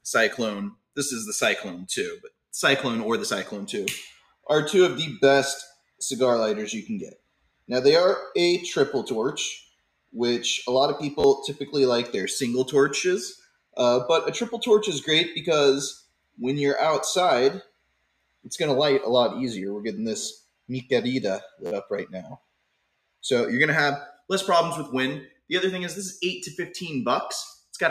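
A speech-tuned noise suppressor was left running on non-speech audio, and it treats the steady parts of the sound as noise. Across the whole clip the level swings by about 5 dB as sustained material and tails are pulled down while attacks pass through, giving a pumping, thinned character. The sound cut by the noise suppressor is deepest at 0.01–2.38 s, 4.13–7.69 s, 9.62–10.13 s, 13.36–13.77 s, 15.97–18.46 s and 20.38–25.5 s. In these spans, held sound and decays sink by about 21–22 dB for stretches of up to about one and a half seconds. A repeated buffer also occurs twice, when fresh audio did not arrive in time and the output replayed its last block. At 11.20–11.24 s a short piece of about 12 ms, which fits a 512-sample buffer, plays three extra times. At 21.66–21.71 s it plays four extra times. Each event is heard as a brief buzzy stutter with hard joins, and roughly 40 ms and 50 ms of audio are lost respectively.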